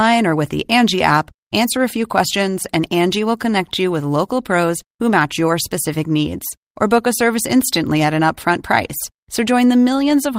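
No faults turn up anywhere in the recording: no dropouts, clicks, glitches or level problems from beginning to end.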